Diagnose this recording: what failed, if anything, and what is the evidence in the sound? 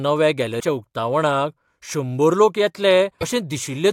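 Damaged data in a compressed stream, at the codec stage: brief glitches at 0.56 to 0.63 s, just before "उक्तावणाक शंबर लोक", and at 3.18 to 3.23 s, right after it. Corrupt frames are misdecoded or refused while the decoder loses sync and searches for the next frame header.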